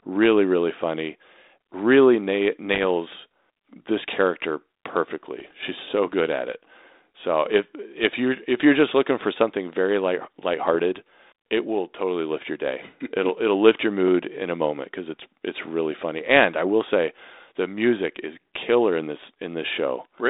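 Short pops and rough, crackling bursts with brief level jumps at 2.73 to 2.88 s, 5.40 to 5.51 s and 10.70 to 10.76 s are bit errors on an ADPCM link. Flipped bits, around 0.2 percent, knock the decoder's step size and predictor off track, so each error rings on briefly. The narrow band, capped near 3.7 kHz, suggests a 32 kbit/s G.726 path.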